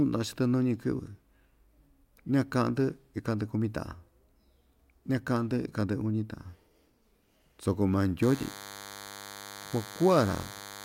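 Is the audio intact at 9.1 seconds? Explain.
No. From 8.23 s, just after "soko maa", to the end of the clip, a DECT cordless phone buzz is present: a nearby DECT handset or base sends radio bursts every 10 ms that the audio circuitry rectifies, producing a thin, steady 100 Hz buzz with many harmonics roughly 15 dB below the speech.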